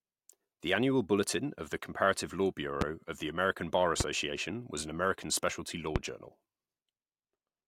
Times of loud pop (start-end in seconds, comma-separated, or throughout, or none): 2.81-2.84, 4.00-4.03, 5.96-5.98